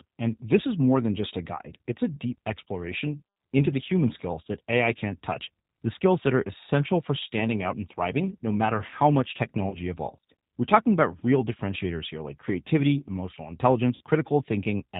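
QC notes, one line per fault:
Throughout, G.729 codec: the whole clip has the slightly rough, synthetic edge of an 8 kbit/s G.729-style coder, probably the A variant. Speech is rebuilt from a vocal tract filter plus a few pulses per frame, so nothing above 4 kHz survives and the voice comes across boxy and thin.
9.70–9.77 s and 13.95–14.01 s, VoIP packet loss concealed by the speech codec: right after "no matter how much" about 20 ms drops out, and after "here like creativity emotional" about 60 ms. The decoder stretches its last pitch and filter into a buzzy tone or coloured noise that fades, and the voice stays weak for a moment after audio resumes. The second gap is longer.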